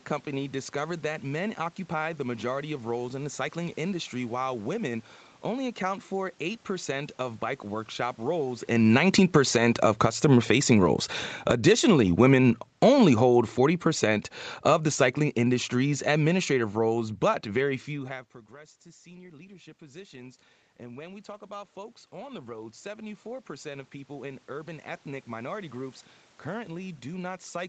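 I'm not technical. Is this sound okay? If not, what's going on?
No. Just after "of bike workshop", around 8.2 seconds, the voice and the room sound behind it sink together. This is automatic gain falling: the call's volume control judged the sound too loud and turned it down. It happens again at 11.35 and from 12.7 to 17.8 seconds.

The opposite also happens: voice and background swell up together. This is automatic gain rising, the same control turning up sound it judged too quiet. It happens from 9.5 to 11.1 seconds, from 11.6 to 12.3 seconds, and slowly from 18.1 to 26 seconds. The talker shifting closer to or away from the microphone around 8.5 and 18 seconds seems to have set the control hunting.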